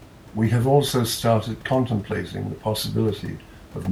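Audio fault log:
No faults detected; the only background is room noise sitting about 22 dB below the speech, which belongs to the recording space rather than the signal chain.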